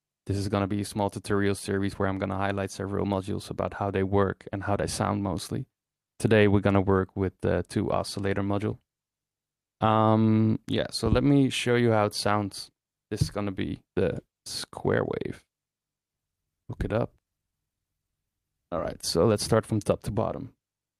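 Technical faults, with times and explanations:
No technical faults detected anywhere in the clip.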